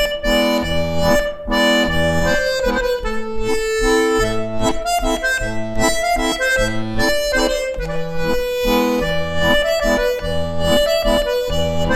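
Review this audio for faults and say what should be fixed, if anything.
No technical faults can be heard anywhere in the audio. Nothing needs to be fixed.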